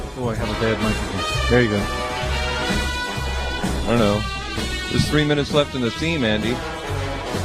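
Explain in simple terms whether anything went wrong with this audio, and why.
Nothing went wrong with this audio, because no fault can be heard anywhere in it.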